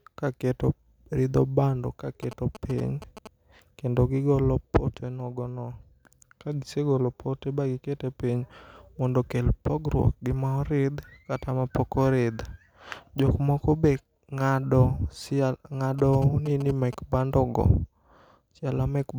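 A nearby 2G phone exchanging signalling bursts had its radio pulses rectified by the audio circuit, giving GSM signalling bursts: a galloping dit-dit-dit of short 217 Hz buzzes well below the speech, from 2.23 to 3.27 s after "keto ridho bando ka", and 15.99 to 16.95 s before "bando go".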